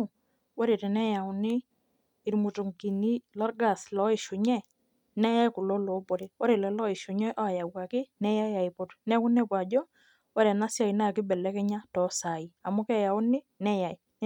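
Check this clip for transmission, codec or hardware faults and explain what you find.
Nothing in the speech recording points to a transmission, codec or hardware fault.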